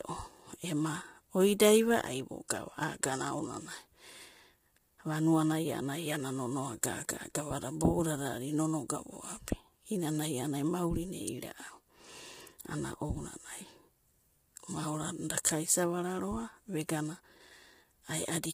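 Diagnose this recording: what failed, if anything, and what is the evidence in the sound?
The codec stage failed: throughout the speech, the sound is rough and grainy, with noise filling the gaps between harmonics and nothing above 15.6 kHz, likely low-delay AAC compression (AAC-ELD) at a bitrate around 24 kbps, whose short frames resolve pitch harmonics poorly and starve them of bits.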